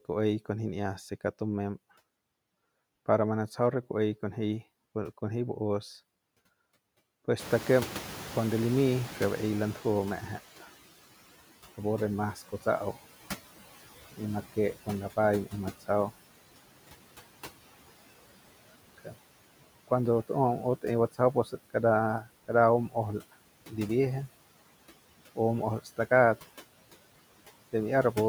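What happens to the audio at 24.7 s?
At 24.7 s, noise suppressor artifacts are present, as they are across the whole clip. The suppressor pulls down bands it judges to be steady noise by about 16 dB, frame by frame. With room noise raised since around 7.5 s and sitting about 17 dB below the speech, the residue pumps between phrases.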